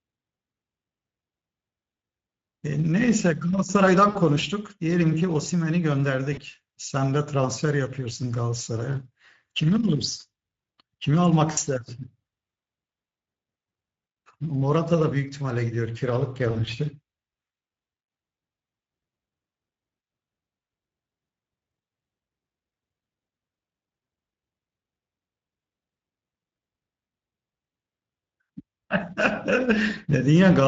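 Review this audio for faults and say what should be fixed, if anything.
The speech sounds hoarse and grainy throughout, with a rough, noise-like edge in place of clean consonants and a thin top end. This is plainly audible Speex codec damage: the CELP coder has too few bits to model the excitation, so it substitutes shaped noise, and any band above 4 kHz is only a synthetic fill. The level of damage fits a mid-range setting around 16.8 kbps. Raise the Speex quality setting, or move to a modern codec such as Opus at a comparable bitrate.

Four brief dropouts turn into a buzzy tone or coloured noise that fades, and the speech stays weak or distorted for a moment afterwards. They fall at 4.09 to 4.18 s (about 60 ms lost), 6.33 to 6.40 s (40 ms), 11.51 to 11.59 s (60 ms), and 16.51 to 16.69 s, where 60 ms of loss is scattered over 160 ms with no lost run longer than 40 ms. This is VoIP packet loss concealed by the speech codec: the decoder stretches the last pitch and filter with falling gain, and the following frames recover slowly. 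Use a jitter buffer with forward error correction or redundancy, and fix the network path that is dropping packets.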